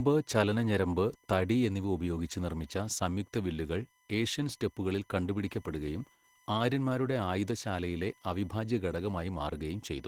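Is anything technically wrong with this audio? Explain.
Yes. Two faults run through the whole speech clip: an electrical whine and audible voice-codec damage.

USB whine: A steady, fixed-pitch tone sits under the speech from start to finish, with its fundamental at 1 kHz and the strongest component at its 2 kHz harmonic. USB transfers data in 1 ms frames, and the current drawn at that rate leaks into the audio path through shared power or ground. The whine sits roughly 35 dB below the speech.

Opus voice compression: Throughout, the speech sounds hoarse and grainy, with a slightly robotic edge, and the damage is plainly audible. The sound points to Opus in hybrid mode at a low bitrate, around 16 kbps, using 20 ms frames. In this mode the SILK linear-prediction coder handles the band below 8 kHz and a CELT layer covers the range above it. The band stays fullband, extending to about 20 kHz, so the speech is not muffled. 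The coarse coding of the excitation at this rate is what roughens it.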